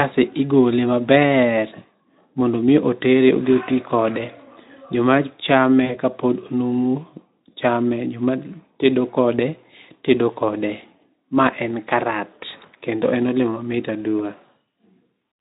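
It's a speech clip with one dropout: at about 5.85 s there's VoIP packet loss concealed by the speech codec. Roughly 40 ms of audio went missing, and the decoder filled the gap by stretching its last pitch and filter into a fading tone or noise. The disturbance lasts until about 5.99 s while the decoder recovers, all carried over a Speex stream at 15 kbps with light codec damage.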